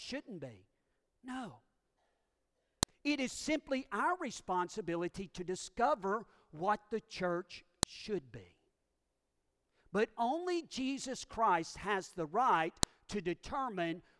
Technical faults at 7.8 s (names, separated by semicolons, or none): file header played as audio